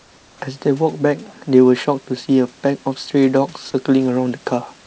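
Comfort noise in place of the background runs from 0.00 to 0.41 s, before speech begins. The room's real background, sitting about 34 dB below the loudest sound, gives way to a smooth, featureless hiss about 3 dB quieter, lacking the texture that returns once the audio resumes. The likely cause is discontinuous transmission: the sender stopped sending during the pause, and the receiver filled the gap with synthetic noise shaped roughly like the room. Throughout, nothing is heard above 8 kHz.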